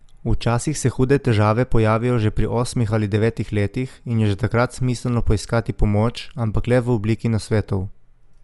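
Speech, dull throughout, with nothing above about 11.4 kHz and a rough, fluttering noise around voiced tones, likely from Dolby Digital compression at a low bitrate near 64 kbps.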